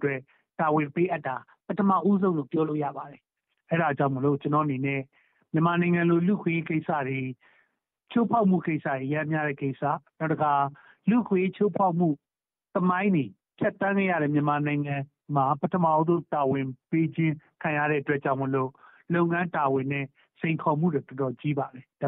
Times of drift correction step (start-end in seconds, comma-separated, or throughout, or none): 1.08-3.30, 15.82-17.50